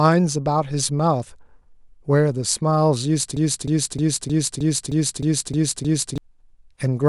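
A broken-record loop runs from 3.37 to 6.18 s in this speech clip: a 310 ms fragment repeats exactly, back to back, nine times. The player or stream likely stalled and kept resending its last buffered piece, so the speech that belonged there is lost.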